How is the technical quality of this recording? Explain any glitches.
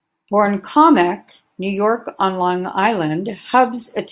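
No glitches are audible anywhere in the recording; the signal path is intact and there is nothing to explain.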